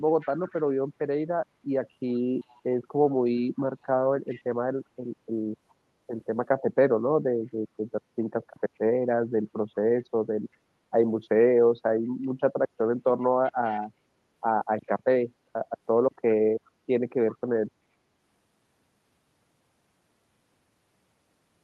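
An echo canceller on a loudspeaker end is likely failing to remove all of its microphone pickup, so echo leak returns a copy of the speech about 380 ms late. It arrives in scraps at 0.2–0.62 s, 2.42–2.75 s, 3.82–3.86 s, 4.3–4.43 s, 13.45–13.8 s, 16.65–16.7 s and 17.31–17.38 s. These scraps sit roughly 25 dB below the speech at their loudest and drop to faint traces near 40 dB down at 3.82 s and 16.65 s.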